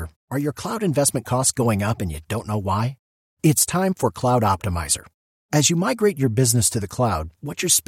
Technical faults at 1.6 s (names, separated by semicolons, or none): none